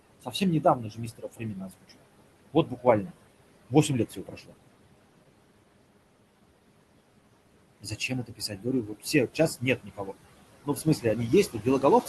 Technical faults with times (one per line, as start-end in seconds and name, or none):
0.00-12.08 noise suppressor artifacts
0.22-2.04 speech cut by the noise suppressor
2.53-3.12 speech cut by the noise suppressor
3.69-4.53 speech cut by the noise suppressor
7.80-10.14 speech cut by the noise suppressor
10.64-12.08 speech cut by the noise suppressor